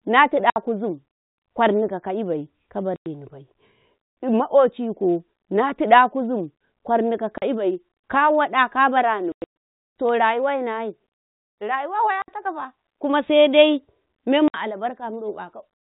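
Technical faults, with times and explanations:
0.50–0.56 s, 2.96–3.06 s (after "ƙwarni ka kaibai"), 7.38–7.42 s (after "tiɗa kuzim ƙwarni ka"), 9.32–9.53 s, 12.22–12.28 s and 14.48–14.54 s: packet loss filled with silence. Missing packets were replaced by dead silence, so the sound drops out abruptly with hard edges. Most gaps last 40 to 100 ms in steps that fit 20 ms packets. At 9.32 s the dropouts are scattered across 240 ms, with the longest continuous hole lasting 120 ms.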